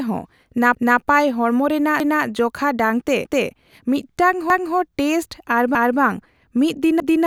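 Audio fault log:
0.75–1.0, 2.0–2.25 (just before "ᱡᱚᱠᱷᱟ ᱰᱟᱝ ᱛᱮ"), 3.25–3.5, 4.5–4.75, 5.75–6.0 and 7.0–7.25 s, overlapping chunks: each 1 s chunk restarts 250 ms early, so that slice of speech replays, giving a regular stutter every 1.25 s.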